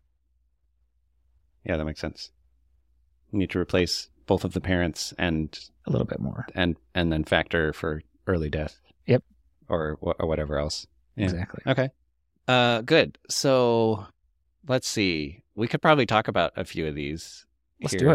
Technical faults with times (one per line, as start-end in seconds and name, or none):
3.79-3.81 loud pop